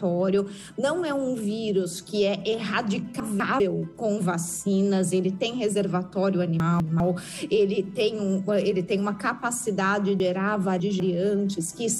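Chunks out of order occur at 3.2–3.6 s and 6.6–7.0 s, where a 200 ms chunk plays one slot late, and at 10.2–11.0 s, where one lags three slots. Each swap sounds jumbled at the hard joins. A spectrogram shows abrupt vertical seams at the joins.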